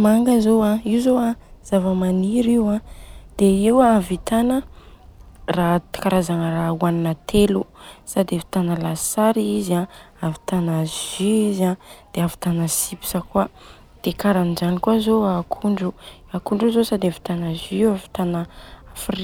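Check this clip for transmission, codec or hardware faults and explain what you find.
Nothing wrong turns up here; the speech comes across steadily the whole way, with no faults from transmission, coding or hardware to point to.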